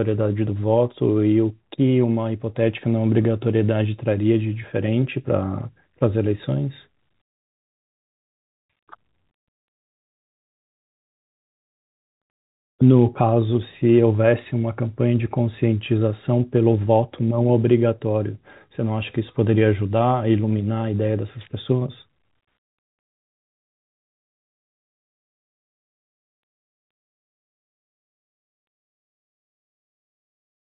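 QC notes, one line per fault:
Nothing to flag here; the speech sounds like an ordinary G.711 phone line, with the usual telephone band topping out around 4 kHz.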